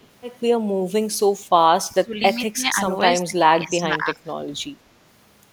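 An echo leak appears at 0.02 to 0.07 s in this speech clip: a very faint copy of the voice, far below the main speech and delayed by 268 ms, most likely from a loudspeaker on the far end whose echo canceller let part of its microphone pickup return down the line. Speech suppressed in double talk follows from 1.88 to 4.7 s, where the talker's level sinks, at its deepest by about 25 dB, across roughly two seconds in total. This is likely the echo canceller treating overlapping talk as echo and turning everything down together.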